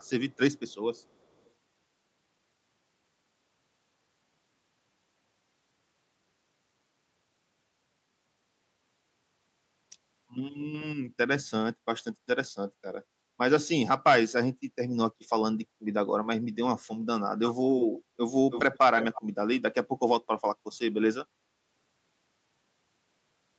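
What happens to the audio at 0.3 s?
At 0.3 s, lasting until 0.35 s, a brief scrap of echo leak comes through: a faint delayed copy of the speech, trailing the original by about 0.38 s and sitting far below it in level. The likely cause is a far end playing the call over a loudspeaker, where the echo canceller failed to fully suppress what its microphone picked up, so a residue was returned. Here it is only a short, quiet fragment.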